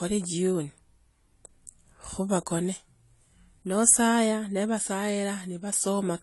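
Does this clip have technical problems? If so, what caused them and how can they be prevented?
Yes, the speech runs dull and smeared the whole way through, with nothing above 11.5 kHz and a plainly audible warbly texture, likely AAC compression at a low bitrate around 32 kbps discarding detail. Encode at a higher bitrate, or keep a lossless copy.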